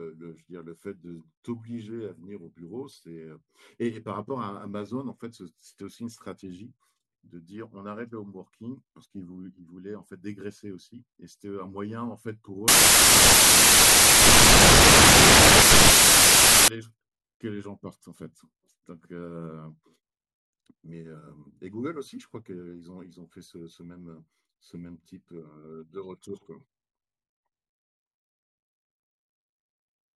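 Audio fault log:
12.68–16.68 s: samples built from the wrong bytes. Misassembled sample bytes push the fast-changing low bits into each value's top, turning the speech into loud, harsh broadband noise for 4 s.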